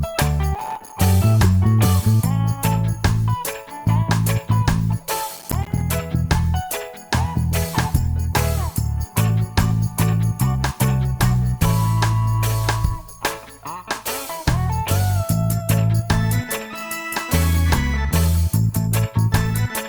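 Processor overload crackle tears through the audio at 0.55–0.93 s and 5.33–5.81 s. Missed buffers of roughly 5 ms drop to silence, showing as notched waveform gaps and vertical spectrogram streaks.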